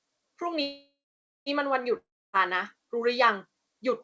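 From 0.62 to 1.49 s the speech stops and the last sound is drawn out into a fading buzz, then about 0.54 s of silence. It resumes exactly where it left off. This is a call audio freeze, likely from delayed packets draining the jitter buffer, adding about 0.84 s of delay with nothing lost.

At 1.97 s a second break begins. The sound smears into a decaying buzz, falls silent for about 0.29 s, and returns at 2.36 s. This is a long network dropout: about 0.36 s of speech likely never arrived and is missing from the recording. Throughout, the call path passes nothing above 8 kHz, which fits a wideband call codec such as G.722.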